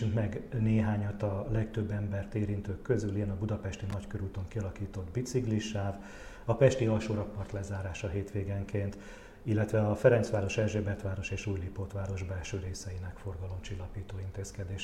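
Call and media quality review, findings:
Loose connector crackle, 3.90–3.94 s: brief irregular scratchy burst, contact making and breaking. Waveform shows chopped, jagged spikes; spectrogram a short broadband vertical smear.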